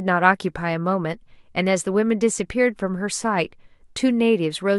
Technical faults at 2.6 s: none

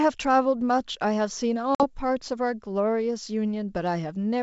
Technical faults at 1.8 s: packet loss on an ADPCM call

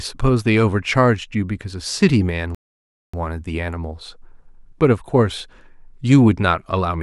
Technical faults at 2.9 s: playback stall

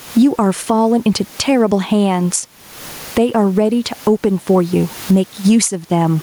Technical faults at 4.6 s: gain pumping

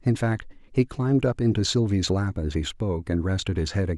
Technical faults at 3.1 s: none

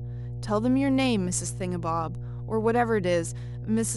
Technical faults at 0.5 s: mains hum

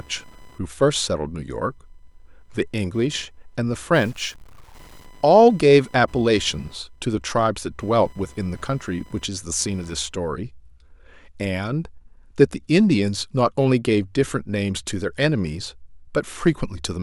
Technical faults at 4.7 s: computer activity noise; stuck bit

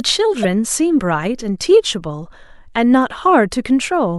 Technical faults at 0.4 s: damaged data in a compressed stream

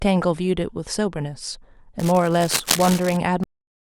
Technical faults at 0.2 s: none

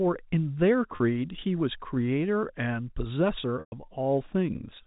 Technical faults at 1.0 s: packet loss with pitch repetition

